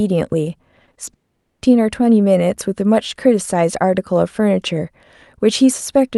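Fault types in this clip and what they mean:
Short concealed packet loss: Brief gaps where audio packets failed to reach the decoder in time, each patched by extending the preceding sound and then blending back into the real signal. Three occur in quick succession at 0.85, 0.93 and 1.05 s, each spanning about 40 ms with roughly 20 ms synthesised. They are heard as small smears or wobbles in the speech, and a short consonant sound can disappear inside a patch.
Long network dropout: A sustained break in incoming audio from 1.13 to 1.63 s, most likely caused by the network connection stalling rather than by the source. For about half a second the receiver has nothing to play. It continues the last sound only briefly before that fades out, leaving near-silence for most of the gap. The speech then resumes further on, with the missing portion simply gone.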